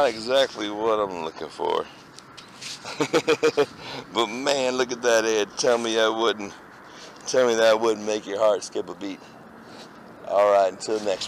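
No technical faults are audible.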